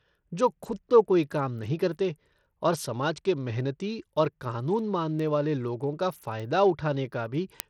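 Bluetooth SBC compression runs through the whole speech clip, likely from a low bit pool that fits roughly 80 kbps. The sub-band coder starves its top bands of bits, so the treble thins and flickers, and a plainly audible gritty grain and aliasing sit on the speech.

Word clock ticks start at 0.39 s and repeat until 7.6 s, about twenty sharp clicks roughly every 0.4 s. An unlocked receiving clock drifts by around 50 ppm against the sender, and each time the clocks slip past each other one sample is dropped or repeated, leaving a tick.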